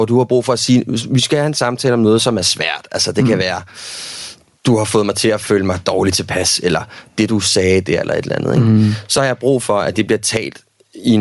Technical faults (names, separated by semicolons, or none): gain pumping; Bluetooth LC3 compression; lost LE Audio frames